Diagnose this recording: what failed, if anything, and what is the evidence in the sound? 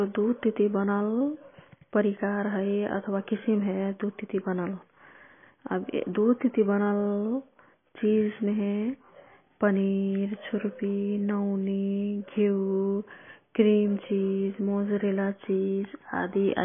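Codec stage: throughout, the speech sounds watery and swirly, cut flat at 3.5 kHz on a spectrogram with flickering holes. The likely cause is heavy MP3 compression at a very low bitrate.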